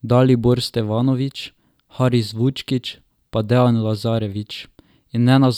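Nothing in the speech recording points to a technical problem: no dropouts, distortion, noise bursts or timing irregularities can be heard anywhere in the signal.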